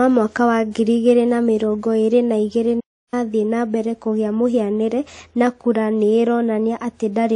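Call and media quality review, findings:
Transcoding between lossy codecs, throughout. Dull, band-limited sound. Nothing above 10.6 kHz. Artefacts from two coders heard together. Likely cause: a low-rate MP3 stage, around 40 kbit/s, re-encoded as WMA near 64 kbit/s. The second coder spends bits on the first one's artefacts and adds its own. The lower cut-off stays.

Hard clipping, 1.08 to 1.11 s. Brief crackle on a peak after "wa ngiri", before "na mĩrongo ĩrĩ na". Overdrive about 1 dB. Gain stage or converter ceiling exceeded. Peak tops flattened. Added high harmonics heard as crackle.

Playback stall, 2.80 to 3.14 s. Silence of about 0.32 s mid-flow after "mĩrongo ĩrĩ na igĩrĩ". Resumes at "na mbere kũgĩa mũhianĩre". Likely player side. Output halts, then continues.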